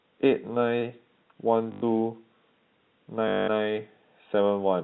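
From 1.72 to 1.82 s and 3.28 to 3.48 s, packet loss with last packet repeated loops one fragment into a robotic 50 Hz buzz, not a silent gap, which fits 20 ms packets.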